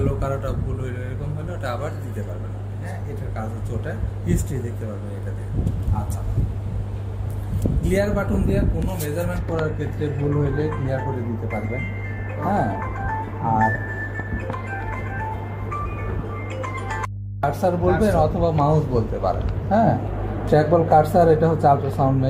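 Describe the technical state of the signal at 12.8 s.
At 12.8 s the signal carries mains hum, present here as it is across the whole clip. The power line is leaking into the audio path, most likely through a ground loop or a nearby transformer, and its 50 Hz frequency rides on top of the signal. The result is a steady low drone with a few low harmonics, strong enough to sit only a little below the wanted sound and clearly audible beneath it.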